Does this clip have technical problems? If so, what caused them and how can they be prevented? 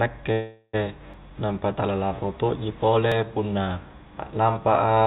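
Yes. From 0.32 to 0.75 s there is a call audio freeze. The sound stretches into a fading buzz and ends in a short silence. Speech then resumes where it stopped, about 0.4 s late, with nothing lost. Late packets likely drained the jitter buffer. A steadier network or a deeper jitter buffer would prevent this.

Audio is also missing between chunks, at 1.14 s, just before "nampa tala larro tokji", and at 3.12 s, just after it. Each skip drops roughly 20 ms and splices the edges together. The 2 s spacing likely reflects 2 s processing blocks losing audio at each boundary. Overlapping or gapless buffering between blocks would prevent it.

The narrow call sound, with nothing above 4 kHz, comes from the G.711 mu-law codec.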